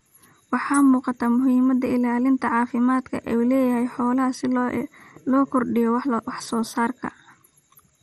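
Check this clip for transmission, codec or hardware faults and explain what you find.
One codec fault runs through the whole speech clip. Throughout, the sound is dull and gurgling, with nothing above 13.6 kHz. This is likely MP2 compression starved of bits, near 56 kbps, switching off upper sub-bands and coarsely quantising the rest.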